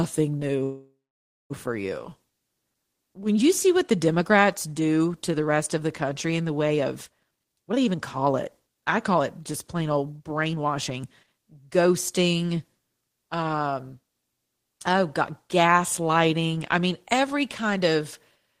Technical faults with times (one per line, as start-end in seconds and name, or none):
0.63-1.52 call audio freeze
7.19-11.43 jitter buffer speed-up